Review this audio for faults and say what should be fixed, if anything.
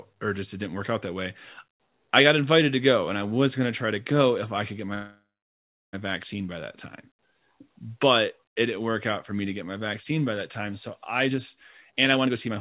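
A call audio freeze runs from 4.94 to 5.95 s, right after "if i could get". The sound trails off into a fading buzz, and the last 0.7 s or so is silent. It then resumes with "vaccine by that time". The likely cause is delayed packets draining the jitter buffer. Unlike packet loss, nothing is skipped: the sound picks up exactly where it stopped, and everything afterwards sits about 1 s later. To prevent it, fix the network delay spikes on the route, or allow the jitter buffer a larger target depth.

A jitter buffer speed-up follows from 11.29 to 12.52 s, after "that time so i". The receiver was holding more audio than it aims for and trimmed it by cutting short pitch-period slices over and over, roughly 0.3 s in total. The sound plays at about 120% speed and seems hurried, but the pitch does not change. That steady pitch is what separates it from a resampling or clock-rate speed-up, which would raise the pitch as well. 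Smoothing delay spikes so packets do not arrive in bunches avoids the backlog, and capping the buffer's catch-up rate makes any remaining correction gentler.

The call path's band limit at 4 kHz, which fits G.711, is the normal dull top end of that codec and is not a fault.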